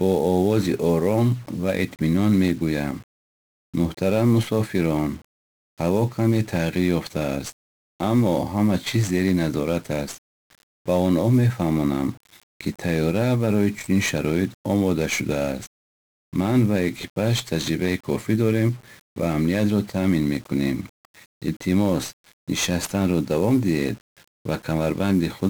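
From the first second to the last, the speech carries the heavy damage of 1-bit DFPWM compression. Each sample keeps only a single bit that nudges a running estimate up or down, so the waveform becomes a jittery staircase chasing the signal. The result is dense, broadband quantisation noise: fuzzy, crackling grain under every syllable, with the upper frequencies swamped by hiss. A spectrogram would show a raised noise floor smeared across the whole band, filling the gaps between words.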